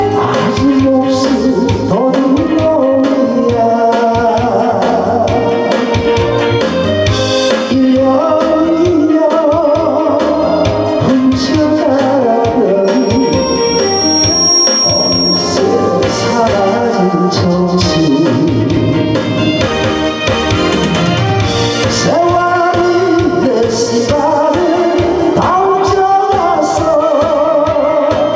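From the start and for the whole clip, the level is pulled down on loud sounds and let back up after them, a breathing movement of roughly 5 dB. This gain pumping likely comes from the input gain being set far too high, with a fast limiter pulling it back on every peak. On a waveform the envelope looks flattened, with quiet stretches lifted toward the loud ones. On a spectrogram the noise floor brightens between events and darkens beneath them.

From 12.84 s to 15.79 s a loudspeaker feedback squeal appears. The microphone picked up the loudspeaker it was feeding, and at 5.6 kHz the loop gain passed unity, so that frequency fed itself and grew. It rises over roughly one and a half seconds into a squeal about 5 dB above the wanted sound. On a spectrogram it is a single bright horizontal line at 5.6 kHz that thickens as it builds, sitting well under the 8 kHz ceiling of the call's band limit.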